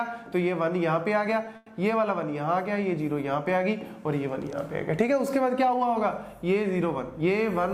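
At 1.56–1.73 s a call audio freeze, likely late packets, buzzes the last sound; unlike a dropout, nothing is lost, only delayed 0.1 s.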